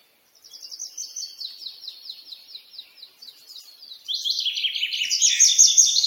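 A noise suppressor built for speech was left running on material it was never meant for, and it shows across the whole clip. Because it treats steady tones, ambience and decaying tails as noise, the gain keeps riding up and down by roughly 10 dB. Onsets pass through while anything sustained gets pulled down, so the sound pumps and thins. On a waveform the envelope looks choppy, with held portions sagging just after each attack. A spectrogram shows sustained partials and reverb tails fading early, while transients stay bright.

The clearest cases are where the noise suppressor cut the sound hardest. From 0.0 to 0.51 s the opening is pushed down as much as about 14 dB, so it arrives sunken in level before the level recovers. A longer stretch from 2.23 to 4.08 s drops by up to about 11 dB, and the steady content there sinks. On a waveform both spans appear as shrunken, flattened stretches of envelope. 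A spectrogram shows them as darkened bands, with the sustained energy thinned to faint traces between the surviving attacks.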